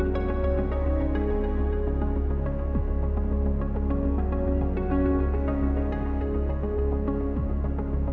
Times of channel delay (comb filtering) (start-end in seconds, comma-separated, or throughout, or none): none